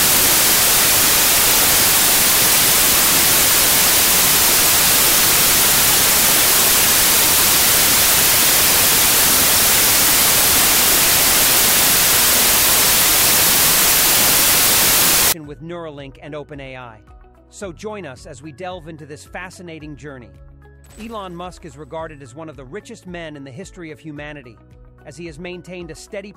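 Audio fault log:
0.00–15.32 s, wrong sample width: 32-bit integer data read as 16-bit splits each sample in two, one half holding the real top bits and the other low-order junk. The result is loud noise over sound at half speed, an octave low. A byte-order error would keep the speed unchanged.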